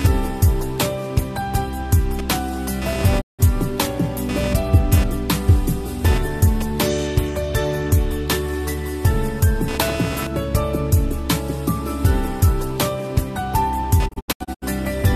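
Computer activity noise runs through the whole clip: processor and peripheral load shifting the shared audio ground, heard as a scratchy buzz pulsing at a few hundred times per second, well below the main sound, showing as fine vertical striations across the spectrogram.

A digital broadcast dropout at 3.20 to 3.41 s fades out over 20 ms and mutes, losing 168 ms of sound. A second, from 14.07 to 14.64 s, scatters 288 ms of silence over 528 ms in holes up to 72 ms, appearing as flat waveform gaps and blank spectrogram columns.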